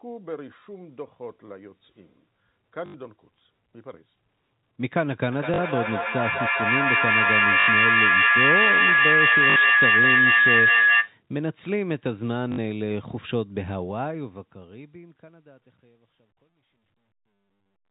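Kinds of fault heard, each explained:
Packet loss with last packet repeated: lost packets were covered by replaying the last one that arrived, so 40 to 80 ms stretches loop with a robotic buzz near 50 Hz, which fits 20 ms packets, at 2.86, 5.54, 7.6, 9.5 and 12.52 s.
Feedback howl: two devices in one room formed a microphone-to-loudspeaker loop that gained level on each trip, so from 5.32 to 11.18 s a tone around 1.5 kHz builds to about 8 dB above the speech, with the loop coming round roughly every fifth of a second.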